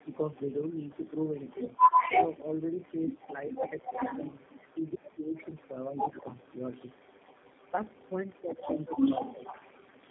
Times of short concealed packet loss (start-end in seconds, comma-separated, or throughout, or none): none